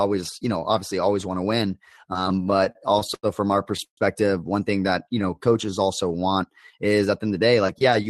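From 2.29 to 3.26 s, just after "always want to win", there are repeated stalls, a stutter. Packets reached the receiver late or too slowly. Its jitter buffer kept running dry. Each time, the last sound was stretched to cover the wait. There are ten such stalls, the longest about 90 ms. Together they fill 216 ms, roughly a fifth of that stretch. Nothing is lost. The speech drags and hiccups up to "from our".

At 3.84 s, right after "from our", comes a call audio freeze lasting to 4.00 s. The likely cause is packets held up in transit, emptying the buffer. The receiver extends the last sound briefly, then fades it out. About 100 ms of that is plain silence. When the packets arrive, speech resumes at "one thing that". The 130 ms gap adds to the delay. Nothing is cut.

From 5.04 to 6.33 s, after "one thing that", there is a jitter buffer slow-down. The buffer needed a bigger reserve. So the receiver repeated single pitch periods and slivers of pause many times over. 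This adds 156 ms. The speech plays at about 89% speed without dropping in pitch. Sounds are drawn out until "is at the end". All of this is carried through an Opus call path, with the top end cut near 12 kHz.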